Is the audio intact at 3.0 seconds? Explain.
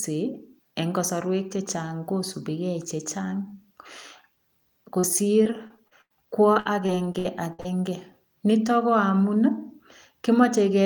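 Yes, the audio is intact at 3.00 seconds: the speech runs through that moment without any dropout, click, glitch or other audible fault.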